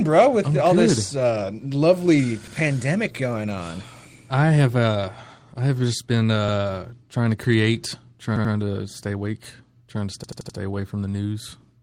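Audio failed to reach the device in time four times, so it replayed its last 85 ms buffer, which fits a 4096-sample buffer. This repeated buffer gives a stuttered repeat with hard joins at 2.48 s and 6.49 s (once each), 8.36 s (twice) and 10.24 s (four times), and nothing appears to be lost.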